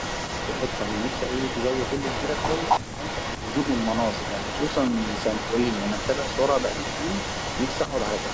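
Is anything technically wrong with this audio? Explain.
Yes. An echo leak runs throughout: the speech repeats 263 ms late, about 10 dB quieter, likely loudspeaker pickup the canceller missed. Spectrograms show faint, delayed duplicate harmonics.

From 2.80 to 2.86 s, speech is suppressed in double talk. Overlapping sound likely confused the echo canceller, which ducked the speech by roughly 40 dB, leaving a brief near-silent notch in the waveform.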